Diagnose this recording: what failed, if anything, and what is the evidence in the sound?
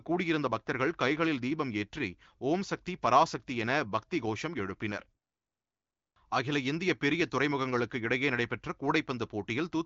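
Nothing failed in this recording, and the sound offers no evidence of a fault.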